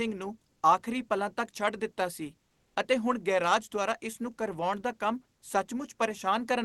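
From 2.47 to 2.75 s, between "ਦਿੱਤਾ ਸੀ" and "ਅਤੇ ਹੁਣ ਗੈਰਾਜ ਦੁਆਰਾ", the quiet background, about 47 dB below the loudest speech, becomes a steady, featureless hiss for 280 ms at the same level. This is likely comfort noise in place of the background from discontinuous transmission. Unlike a dropout, it never falls silent.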